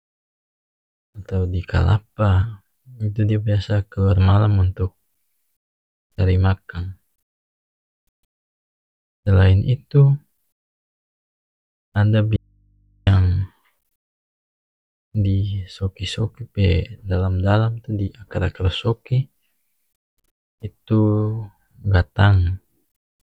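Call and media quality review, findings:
Speech cuts out abruptly at 12.36 s, returns at 13.07 s; the 0.71 s gap holds only mains hum, far below speech level. Audio dropout to a faint residue: likely source lost upstream while the downstream input stayed live, passing open-input hum.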